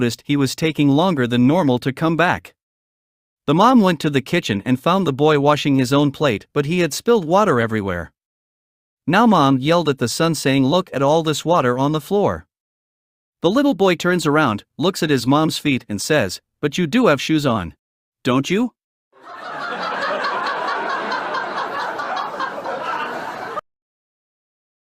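No technical faults can be heard anywhere in the recording, and the signal holds steady throughout.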